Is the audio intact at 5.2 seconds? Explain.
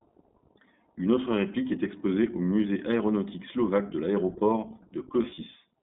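No. Just after "aéronautique slovaque de l'aéroport", from 5.22 to 5.40 s, the speech turns into brief held, buzzy vowel-like fills. These are lost iLBC frames, about 100 ms in short runs of up to roughly 40 ms. The decoder repeats the last pitch cycle with noise, then recovers almost immediately. Throughout, the speech also sounds band-limited to about 200 Hz to 3.7 kHz, slightly rough and synthetic. That is the iLBC codec, which fits 20 ms frames at about 15 kbps.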